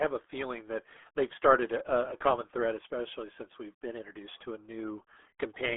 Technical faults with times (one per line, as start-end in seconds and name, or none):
0.00-5.76 RealAudio 14.4 codec